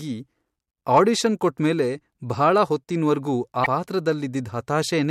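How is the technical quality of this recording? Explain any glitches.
Two brief faults mar the speech. From 0.94 to 1.00 s there is hard clipping: peaks overdriven by about 3 dB are cut flat, adding high harmonics heard as crackle. From 3.62 to 3.66 s, damaged data in the compressed stream makes the decoder misread frames and resynchronise, producing a short chirp, squawk, click or hole.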